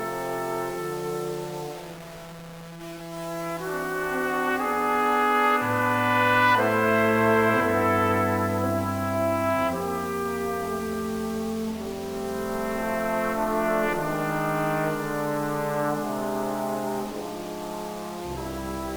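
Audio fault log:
Throughout: low bit depth without dither. The audio was likely truncated to about 6 bits with no dither, so the error follows the signal. Quantisation noise sits roughly 20 dB below the signal, making quiet sounds gritty, and detail below one step sputters or vanishes.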